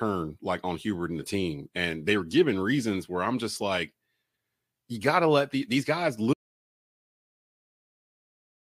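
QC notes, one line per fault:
6.34 s to end: audio dropout to silence. The speech stops abruptly mid-flow at 6.34 s and the remaining 2.4 s is silence, with no room tone, hiss or decay tail. The hard cut to silence, rather than a fade, likely means the input signal was lost, through a disconnected device, a failed link or a mute, while the recorder kept writing. Whatever was said in that final stretch is unrecoverable.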